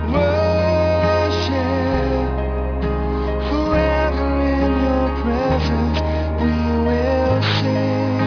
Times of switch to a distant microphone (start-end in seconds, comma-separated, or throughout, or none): none